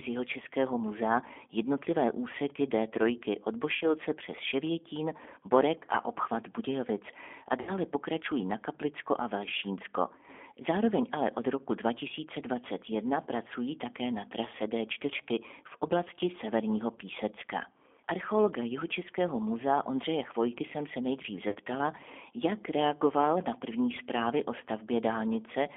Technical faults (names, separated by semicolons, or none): G.729 codec; VoIP packet loss concealed by the speech codec; DC step